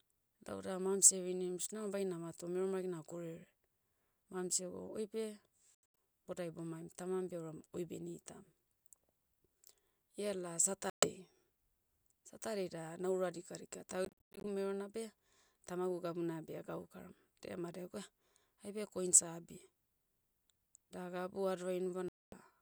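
Silences cut the speech at 5.75 to 5.80 s, 10.90 to 11.09 s, 14.05 to 14.46 s and 22.08 to 22.35 s, likely a Bluetooth dropout of late packets. The first and third break into several short holes. Speech resumes further on rather than where it stopped.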